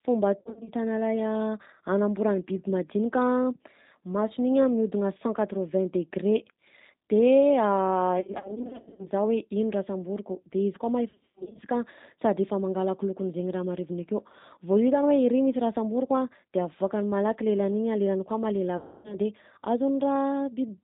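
Throughout, the G.729 codec at 8 kbit/s leaves the speech plainly rough and synthetic; a spectrogram shows nothing above 4 kHz. VoIP packet loss concealed by the speech codec strikes at 0.40–0.70 s, 8.19–9.07 s, 11.10–11.60 s and 18.77–19.17 s. The decoder stretches its last pitch and filter into a fading buzzy tone or coloured noise, seen as smeared spectra and sagging waveform envelopes.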